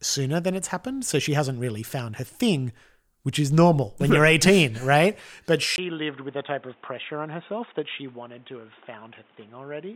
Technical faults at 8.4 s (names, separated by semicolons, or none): input switched to a poorer device